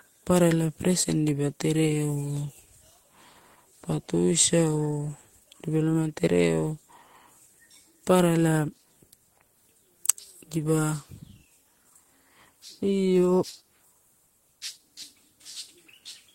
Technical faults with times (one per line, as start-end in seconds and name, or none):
none